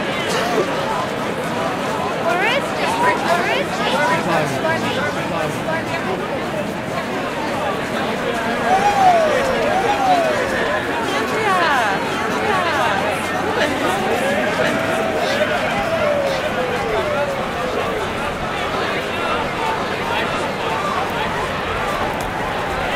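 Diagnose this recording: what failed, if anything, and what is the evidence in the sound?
A second, slower capture path, likely at the driver or buffer stage, is recording the same audio again and mixing it in. Throughout the clip a doubled audio track trails every sound by about a second, a few decibels quieter, full-band and dry.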